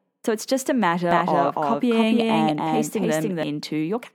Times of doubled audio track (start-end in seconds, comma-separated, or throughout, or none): 1.11-3.43